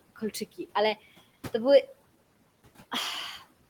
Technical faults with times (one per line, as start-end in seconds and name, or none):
0.00-3.69 noise suppressor artifacts